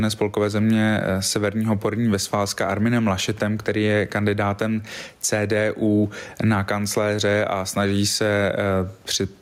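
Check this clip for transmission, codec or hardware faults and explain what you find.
There is one fault, gain pumping, and it runs through the whole clip. The input gain is likely set far too high, so a fast limiter clamps it down on every loud syllable, swinging the level by around 15 dB. The room noise sits about 44 dB below the speech, and the speech sounds squashed.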